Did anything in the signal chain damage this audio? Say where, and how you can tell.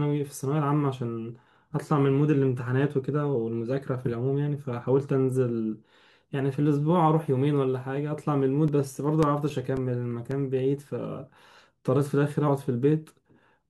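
Yes. CD scratch ticks appear at the playback stage, reading from the disc. Between 7.87 and 10.59 s the speech carries eleven short ticks at a steady rate of about four a second, none longer than a few milliseconds. Each revolution brings the blemish back under the laser, destroying more data than error correction can rebuild, so the player conceals the gap by interpolating or muting. The steady rotational spacing distinguishes this from random digital clicks or network dropouts.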